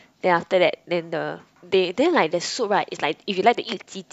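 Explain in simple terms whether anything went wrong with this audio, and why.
Nothing went wrong here; no technical faults are audible.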